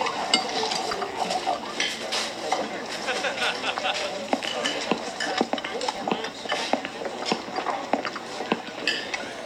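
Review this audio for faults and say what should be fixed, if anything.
Chunks out of order at 0.91–0.94 s and 5.96–5.98 s. A 10 ms chunk plays two chunks late, then one late, jumbling the audio with three hard joins each. The waveform shows step discontinuities, and the spectrogram shows thin vertical broadband lines. Prevention: reorder incoming chunks by sequence number in a jitter buffer before playback.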